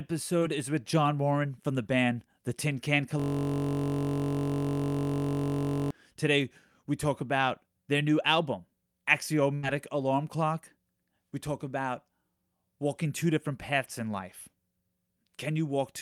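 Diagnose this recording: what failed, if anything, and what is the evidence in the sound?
Network: short concealed packet loss at 0.39–0.43 s, just before "is with". About 20 ms goes missing and is patched by extrapolation, leaving a brief smear, far shorter than a burst.

Driver or buffer: a system hang loop from 3.20 to 5.91 s. One 21.33 ms slice repeats exactly as a steady 46.9 Hz buzz, which fits a 1024-sample ring buffer. Unlike concealment, it never fades or varies.

Network: a burst of packet loss at 9.55–9.65 s. About 80 ms is lost. Concealment holds the last sound, then turns it down and skips ahead, which is longer and audibly fading compared with the earlier short loss.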